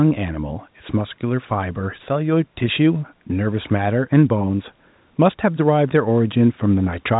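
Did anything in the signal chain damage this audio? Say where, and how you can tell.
No, nothing in this speech stood out as damaged on listening; the narrow telephone bandwidth is what the call path normally gives.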